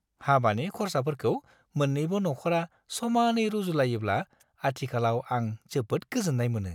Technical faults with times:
none

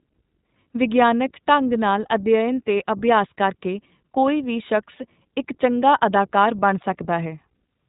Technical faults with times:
0.00-7.88 iLBC codec

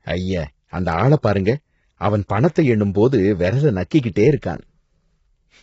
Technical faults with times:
0.00-5.63 low-delay AAC compression

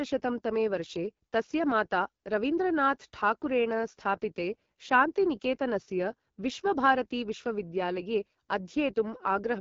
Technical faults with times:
0.00-9.61 AMR wideband (HD Voice) codec

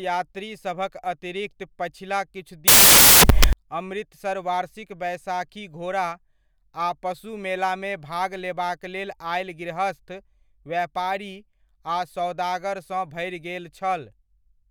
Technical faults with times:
2.68-3.53 samples built from the wrong bytes

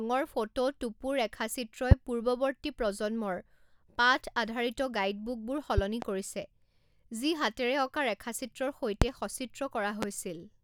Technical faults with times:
1.91-1.95 loud pop
5.78-6.05 loud pop
9.02-9.05 loud pop
10.02-10.06 loud pop

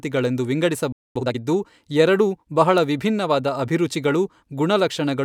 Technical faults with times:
0.92-1.16 playback stall
1.16-1.38 time-compressed catch-up

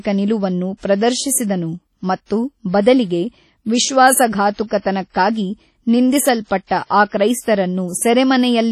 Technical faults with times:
0.00-8.71 WMA compression
0.77-0.83 pre-echo
2.81-2.86 pre-echo
4.54-4.58 pre-echo
6.67-6.71 pre-echo

